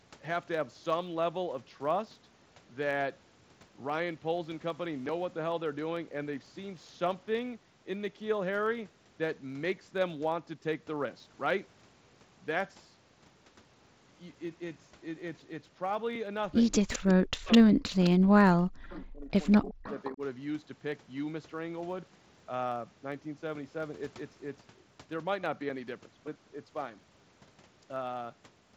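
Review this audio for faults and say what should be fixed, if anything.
Block size mismatch (truncated), throughout the clip: a steady buzz near 92 Hz runs under the speech. One stage writes longer blocks than the next reads, and each block's tail is discarded. The size gap is tiny, so the pace stays essentially normal. Matching the block sizes between the two stages would prevent it.

Echo leak, at 16.74–17.14, 17.52–17.59, 18.03–18.11, 18.90–19.01 and 19.51–20.13 s: a copy of the speech returns 208 ms late, about 10 to 25 dB below it, in short scraps. The likely cause is a far-end echo canceller letting its loudspeaker pickup through. Better echo cancellation or a headset there would prevent it.

Speech suppressed in double talk, from 16.85 to 20.21 s: while the echo scraps overlap it, the talker's speech dips very deeply or drops out in pieces, about two seconds in total. The likely cause is a canceller unable to separate talker from echo, so it ducks both. 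A canceller with proper double-talk detection would prevent it.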